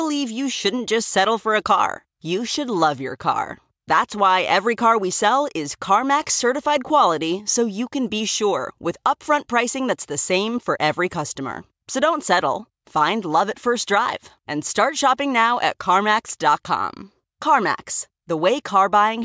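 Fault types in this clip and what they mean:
No fault types can be heard in this clip.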